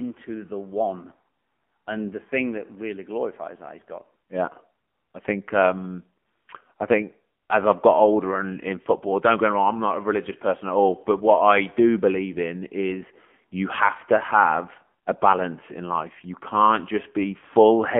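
Thin, boxed-in speech with a buzzy, synthetic edge runs through the whole clip, the sound of the AMR narrowband mobile codec. Energy stops around 3.4 kHz and below roughly 200 Hz, because this phone-line codec samples at 8 kHz and passes nothing above 4 kHz. It rebuilds the voice from a vocal-tract model fed by sparse pulses in 20 ms frames. The damage is plainly audible, which fits a low 7.4 kbps mode.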